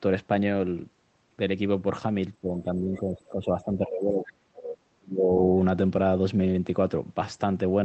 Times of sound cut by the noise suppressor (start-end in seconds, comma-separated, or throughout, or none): none